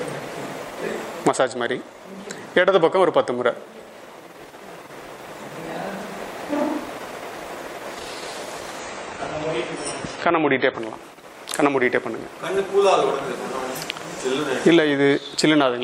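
From 8.79 to 10.79 s, the audio switches to an adaptive stream at a lower bitrate. The connection slowed, so the player fetched a leaner encode. Everything above 9.6 kHz vanishes, which fits a drop to roughly 24 kbit/s. The treble dulls abruptly, with no gap.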